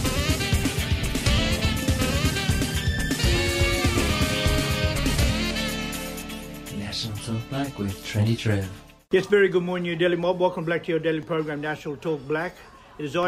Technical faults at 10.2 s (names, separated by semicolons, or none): periodic USB or driver dropouts